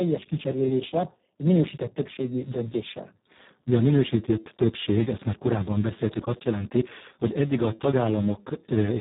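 From start to end, the speech carries heavy Speex codec damage. This CELP coder has too few bits to rebuild the excitation that drives the voice. The result sounds hoarse and noisy. That degree of damage fits a very low bitrate of around 4 kbps. The band is also cut hard. Nothing is present above 3.8 kHz, so the speech sounds dull and narrow.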